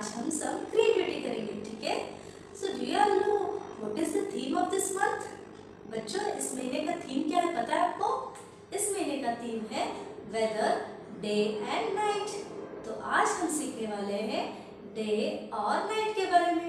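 From the start to about 8.12 s, the sound carries a rough, buzzy flutter, a robotic tremolo pulsing around 50 times a second and swinging the level by about 11 dB. This is overlap-add ripple: the audio was split into windowed frames and rejoined with an overlap whose windows do not add up to a steady gain, so the level dips and swells once per frame, and that frame rate becomes the audible flutter.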